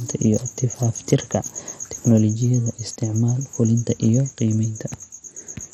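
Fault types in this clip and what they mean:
MP2 compression: The speech sounds dull and grainy throughout, with a gurgling, watery distortion and no content above about 15.5 kHz. This is likely MPEG Layer II coding at a low rate, consistent with roughly 56 kbps. The codec divides the signal into 32 equal sub-bands and shares out a fixed bit budget among them. At this rate the upper bands are starved and drop in and out. The bands that remain are quantised coarsely, which produces the granular texture.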